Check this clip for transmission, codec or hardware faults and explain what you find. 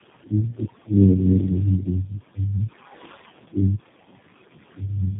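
Two faults run through the whole speech clip.

Noise suppressor artifacts, throughout: the room noise, sitting about 13 dB below the speech, is pulled down by about 20 dB between phrases.

Tandem speech coding, throughout: the sound has been through three low-rate speech codecs in succession, each re-encoding the last one's errors. The result is rough, muffled and warbly, with nothing above 3.8 kHz.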